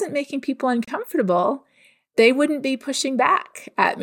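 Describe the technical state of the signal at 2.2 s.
At 2.2 s the speech signal is intact, with no audible dropout, distortion, noise burst or other technical fault at that point.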